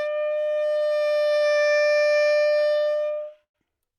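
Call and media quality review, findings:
Repeated stalls (stutter), 2.43–3.56 s. 16 gaps, longest 107 ms, 257 ms filled. Jitter buffer underrun from late packets. Last sound extended, nothing lost.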